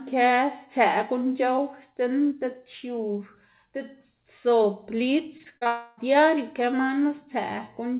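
Repeated packet loss (robotic sound) runs from 5.38 to 5.67 s: five short gaps, the longest 37 ms, are patched by extending earlier sound, leaving choppy speech with pieces missing. A long network dropout follows from 5.67 to 5.99 s, where roughly 0.3 s of speech is replaced by a continued tail, likely because no packets arrived. That tail never falls to silence, and it sits within the 4 kHz band of the G.711 call path.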